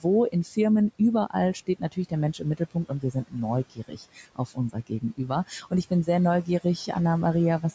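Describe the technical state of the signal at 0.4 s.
At 0.4 s the noise suppressor is misjudging part of the speech as background noise. Between 0.32 and 0.57 s it pulls the level down along with the room noise, by about 11 dB at the deepest point, and around a tenth of a second of that span is affected in total. This is speech cut by the noise suppressor: the soft parts of the sound there come out swallowed and faint.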